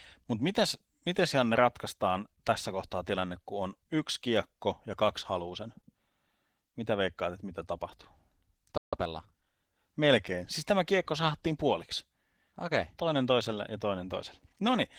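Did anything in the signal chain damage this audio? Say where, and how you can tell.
Yes. Codec stage: Opus voice compression is plainly audible across the whole speech clip. The sound points to a low bitrate of around 16 kbps in hybrid mode, with SILK coding the lower band and a thin CELT layer above 8 kHz, so the excitation is coarsely coded.

Playback stage: a playback stall cuts the audio to silence from 8.77 to 8.93 s, a gap of about 149 ms in mid-flow. The likely cause is the player's buffer running dry or its output thread being blocked until it recovered.

Playback stage again: right after the gap, time-compressed catch-up runs from 8.93 to 9.51 s. The speech is hurried to 1.25 times normal speed at unchanged pitch as the player cuts and cross-fades small pieces to shrink its backlog.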